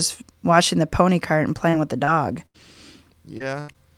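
Repeated packet loss (robotic sound) runs from 1.69 to 3.76 s, right after "the pony cart and". Six short holes, the longest 82 ms, are each patched by extending the preceding sound, so the speech turns choppy with fragments missing.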